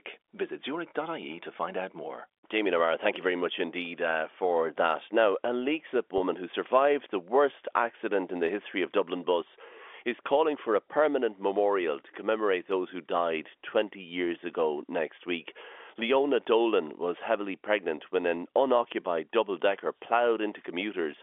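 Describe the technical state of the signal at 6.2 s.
At 6.18 to 6.20 s there is packet loss with pitch repetition. About 20 ms of audio went missing, which fits a single lost packet, and the receiver filled the hole by looping the last pitch period. It sounds like a brief, slightly buzzy hold on the tone. On a waveform, identical repeating cycles appear. On the spectrogram, harmonics run flat and unchanging across the gap, within the 300 Hz to 3.5 kHz telephone band.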